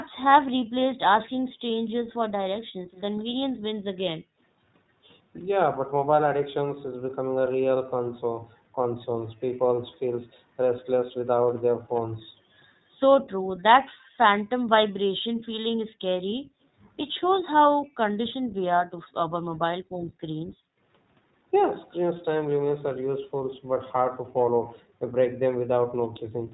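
Throughout, the iLBC codec cuts everything above 4 kHz, a flat ceiling on the spectrogram, and gives the speech a rough, synthetic edge that fits its 20 ms-frame, 15.2 kbps mode. From 2.09 to 4.38 s, 14.07 to 14.16 s, 15.24 to 16.55 s and 19.84 to 20.84 s, the background is gated by the echo canceller. Room sound ducks by about 40 dB (about 19 dB at 14.1 s) for brief stretches, leaving sudden near-empty gaps in the waveform's noise floor.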